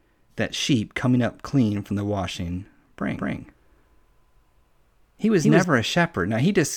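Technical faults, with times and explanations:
3.18–5.64 s, doubled audio track: the speech is joined by a second full-band copy trailing roughly 200 ms behind and at about the same level as the original, so each syllable is followed by a distinct repeat rather than a reverberant tail. The copy has no decay or room colouring and switches in and out abruptly at both boundaries. The likely cause is a second, slower capture path mixed in alongside the first.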